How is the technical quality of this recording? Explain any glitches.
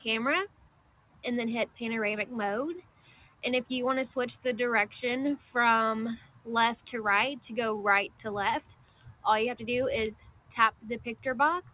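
The recording has clear processing faults: a speech-oriented noise suppressor works on the material throughout and repeatedly pulls sustained sound down. The audio also carries the narrow band of a phone-style call path, with nothing above 4 kHz, which fits G.711 A-law at 64 kbps.

Noise suppressor applied to music or sounds, across the whole clip: a suppressor tuned for speech treats steady tones, ambience and reverb as noise and attenuates them. Level swings by around 15 dB as onsets pass through and held portions and tails are pulled down. The result is a pumping, fluttering texture that thins out between attacks.

Sound cut by the noise suppressor, at 0.47–1.24 s, 1.66–1.81 s, 2.81–3.43 s, 6.16–6.47 s, 8.61–9.25 s, 10.2–10.54 s and 10.71–10.86 s: in each stretch the suppressor judged sustained or decaying sound to be noise and cut it harder than its surroundings. The deepest drops are about 16 to 18 dB. 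They are heard as sinks in level or tails that stop short, lasting from roughly 150 ms to 700 ms.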